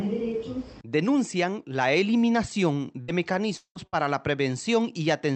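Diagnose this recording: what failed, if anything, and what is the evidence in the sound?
Repeated packet loss (robotic sound) on the network side, 3.01 to 3.99 s: four gaps, longest 178 ms, about a third of that span concealed by extending the preceding sound. It turns choppy, with pieces missing. A spectrogram shows frozen, smeared bands; the waveform shows repeated, looped segments.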